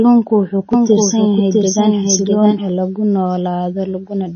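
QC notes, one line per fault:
Throughout, MP3 compression: nothing above 6.5 kHz and watery, swirly detail, plainly audible and likely from a low bitrate near 24 kbps, unlike a simple low-pass.
0.73 to 2.69 s, doubled audio track: a full-band copy about 5 dB quieter trails by roughly 0.7 s, starting and stopping abruptly with no decay, so likely a duplicate path rather than room echo.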